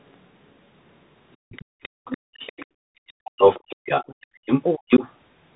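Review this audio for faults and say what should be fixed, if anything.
The headset link ran over the Bluetooth CVSD headset codec, which sends one bit per sample to say whether the signal steps up or down, with an adaptive step size. The sound fits a 64 kbps CVSD stream. Nothing above 3.8 kHz survives, so the speech is narrowband and muffled throughout. The coarse tracking leaves a granular hiss under the speech, turns sibilants scratchy and distorts loud, bright moments. Switching the headset to a wideband profile such as mSBC or LC3 would prevent this.

From 1.32 s to 5.08 s, the other side's voice leaking through is heard under and around the talker, somewhat louder than the talker's own speech. The likely cause is that the loudspeaker's output reached the microphone and the echo canceller failed to remove it, so a second voice rides along with the main one for most of the clip. Better acoustic isolation between loudspeaker and microphone, or a properly converged echo canceller, would prevent it.

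Between 1.37 s and 1.77 s, the background is gated by the echo canceller. While the loudspeaker played, the canceller clamped the microphone down by about 39 dB. The room sound vanishes for about a third of a second in total within that span, then returns once the canceller releases. Gentler suppression with comfort noise filling the gap would keep the background steady.

Speech is suppressed in double talk from 2.05 s to 2.69 s, and again from 3.03 s to 5.02 s. With both sides talking at once, the echo canceller likely could not tell the talker from the loudspeaker echo and pulled everything down by about 40 dB. The talker's speech dips for about half a second in the first span and about a second in total in the second. A canceller with reliable double-talk detection would keep the near talker through overlaps.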